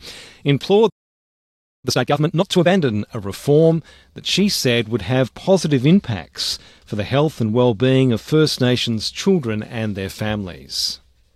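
At 0.89 s the sound cuts off mid-flow and stays silent until 1.85 s, a gap of about 0.94 s. This is a playback stall, most likely the player running dry of buffered data or its output thread being held up, so nothing reached the output until it recovered. On a waveform the trace drops abruptly to a flat line for that stretch; a spectrogram shows a clean, empty vertical band with hard edges where the energy simply stops and resumes.

From 1.85 s to 2.77 s the audio resumes in a rush: time-compressed catch-up, with the player working through its backlog at 2.0 times normal speed. It does this by dropping short slices and cross-fading the remaining pieces together, so the pitch stays where it was while the pacing is hurried. A spectrogram shows harmonic lines at their usual heights but events squeezed closer together, and the waveform envelope looks compacted.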